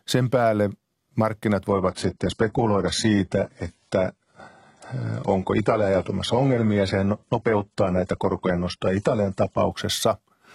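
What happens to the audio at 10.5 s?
At 10.5 s the speech carries through intact, with no dropout, click, distortion or other fault at that moment.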